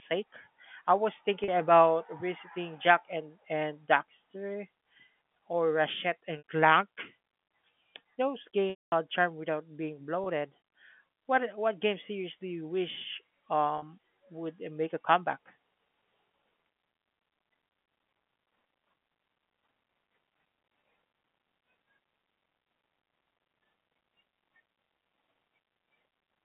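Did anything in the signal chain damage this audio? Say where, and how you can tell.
Yes, at the network stage: packet loss with pitch repetition. Short gaps at 1.44 s (40 ms, right after "I was"), 6.38 s (60 ms), 10.24 s (20 ms) and 13.78 s (40 ms, just before "would make a comeback") each sound like a brief held, buzzy tone. The 220 ms loss from 8.70 to 8.92 s fades to silence before the audio cross-fades back in. The receiver is looping the last pitch period to fill the missing packets. The 20 ms steps point to 20 ms packets.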